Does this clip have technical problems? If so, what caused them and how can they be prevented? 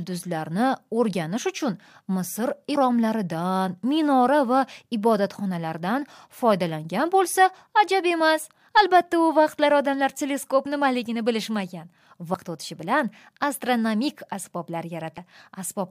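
Yes. Compressed frames are skipped at 2.74 s, at 12.33 s between "odamlar teleskop nimaligini bilishmagan" and "o'tishi bilan astronomik", and at 15.17 s. At each point the speech jumps ahead, losing about 150 ms, 100 ms and 150 ms. These are whole multiples of a 23.2 ms frame, which fits 1024-sample frames at 44.1 kHz. The frames were missing or rejected by the decoder as damaged, and overlapping neighbours smear each join into a short blip. Preventing this means verifying file integrity after transfer and using error-protected storage or transmission.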